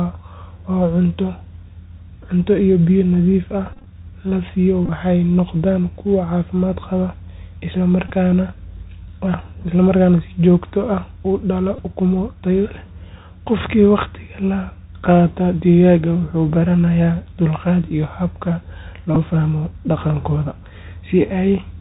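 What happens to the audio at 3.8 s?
A buzzy, stuttering patch from 3.73 to 3.87 s, with short runs of up to about 20 ms buzzing near 267 Hz: Bluetooth headset packet repeated, as lost packets were replaced by decoding the previous packet's bits again. Underneath, the Bluetooth CVSD headset codec limits the sound below 4 kHz and adds granular hiss and scratchy sibilance.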